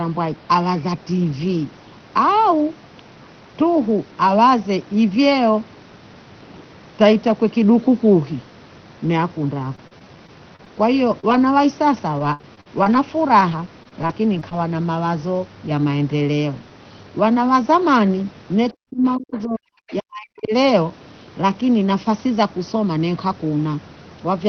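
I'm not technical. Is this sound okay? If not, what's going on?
No, this speech has several problems caused by the call.

Repeated packet loss (robotic sound) happens from 9.63 to 10.68 seconds and again from 11.97 to 14.53 seconds. Small pieces of the audio never arrived, six times in the first stretch and ten in the second. Each time, the receiver filled the hole by stretching out the last sound. The longest holes last about a thirtieth of a second in the first stretch and about a sixteenth in the second. Because the holes come one after another, the speech turns choppy and machine-like.

Short concealed packet loss occurs once, from 11.20 to 11.25 seconds. It is the same kind of patching, but only one small piece went missing. You hear a single brief smear or wobble, and a short sound such as a consonant may disappear. It is a one-off blip rather than a run of choppiness.

A lost packet rebuilt from error correction happens twice, at 11.29 and 11.33 seconds. 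Each is a sliver of sound about a fiftieth of a second long. The next piece of data carried a rough backup copy, so nothing goes missing and nothing is smeared over. Those moments just sound rougher and grainier. This is why they don't wobble like the patched gap just before them.

Speech suppressed in double talk shows up from 18.73 to 19.69 seconds and from 19.88 to 20.54 seconds. The voice drops sharply or cuts out in pieces, for roughly three-quarters of a second each. The likely cause is both people talking at once. The echo remover on the talker's device then turns everything down. The problem is missing voice, not added sound.

The other side's voice leaking through is the opposite problem: sound that shouldn't be there. From 19.90 to 19.95 seconds, a very faint scrap of the other person's voice, likely played from the talker's loudspeaker, slips back in through the microphone.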